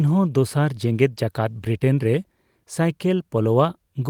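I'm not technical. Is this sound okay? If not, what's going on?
Yes, this recording sounds fine, with nothing going wrong in it that you need to worry about.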